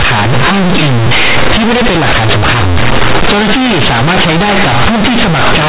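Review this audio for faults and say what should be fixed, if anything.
The whole clip suffers from companded audio read as linear. The bytes were written as mu-law but are played back as plain linear 8-bit samples. Nothing expands them. Each sign change swings across half the output range. Quiet speech comes out as loud as peaks, giving harsh, buzzy distortion and strong noise in the pauses. Beneath it, the mu-law G.711 telephone coding at 8,000 samples a second still caps the sound at 4 kHz. To prevent it, label the stream as mu-law and apply mu-law expansion before playback.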